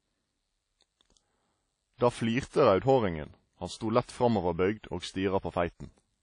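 From start to end, the speech sounds ringing and washy, with a hiss that swells and fades with the signal. Nothing is present above 10.1 kHz. This is likely WMA compression, and the plainly audible damage points to a low bitrate near 32 kbps.

At 3.77 to 3.81 s, a short hiss runs ahead of a sharp attack, which sounds soft and smeared. This is pre-echo. The codec spread noise sized for the loud onset over its whole block, filling about 40 ms of quiet before it.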